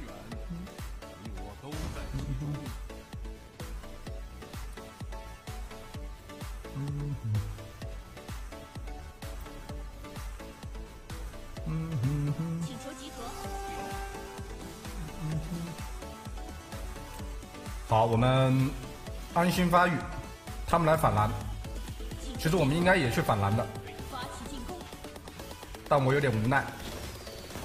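Nothing stood out on listening to this audio.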